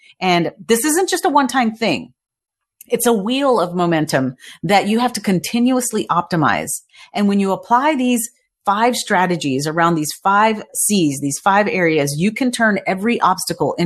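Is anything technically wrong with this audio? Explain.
No, nothing is technically wrong with this audio.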